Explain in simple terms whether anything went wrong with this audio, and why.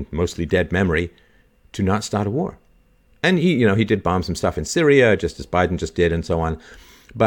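Nothing went wrong: the recorded speech has no audible technical fault at any point.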